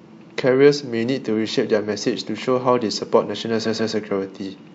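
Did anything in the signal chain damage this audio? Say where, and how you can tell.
Yes. There are repeated frames from the codec or storage stage. At 3.65 s a 139.3 ms block of speech plays twice more, stuttering through 3.93 s. That fits a short run of compressed frames being rewritten or resent, and it adds 278.6 ms to the audio.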